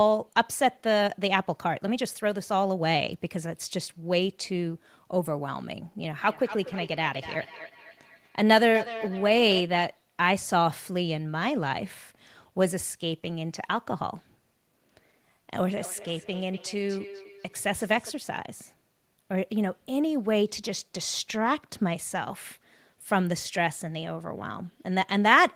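From 6.01 to 9.66 s, feedback echo between two devices sets in. A second device replays the speech, and its microphone loop sends it round again. Repeats arrive roughly every 300 ms, thinner and ringing, peaking about 12 dB below the speech. It recurs from 15.74 to 18.15 s, weaker, at about 18 dB down.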